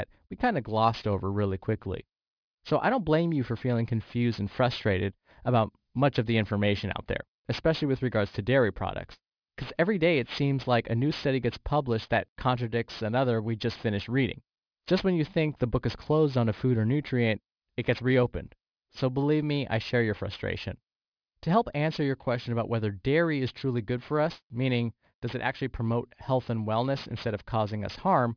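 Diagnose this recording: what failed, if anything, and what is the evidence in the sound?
Aliasing runs through the whole speech clip, from a sample-rate conversion stage. Sibilants sound gritty and metallic, and energy runs hard up to an edge at 5.5 kHz. That fits a drop to 11 kHz with no anti-alias filter. Content above that edge folds back to wrong pitches, about 20 dB below the speech.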